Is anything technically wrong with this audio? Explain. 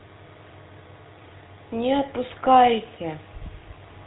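Yes. Throughout the speech, GSM full-rate codec damage is plainly audible. Regular-pulse excitation modelling, consistent with a 13 kbps stream, adds buzzy, gravelly roughness. The spectrogram shows a hard ceiling at 3.9 kHz.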